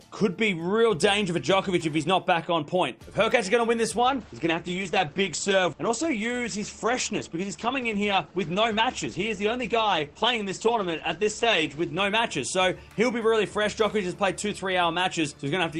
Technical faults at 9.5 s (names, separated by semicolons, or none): adaptive stream at a lower bitrate